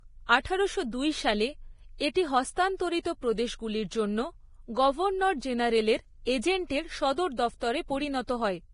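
Likely heavy Vorbis compression, fitting a bitrate near 28 kbps, cuts everything above 10.5 kHz throughout and turns the speech's treble into grainy hiss.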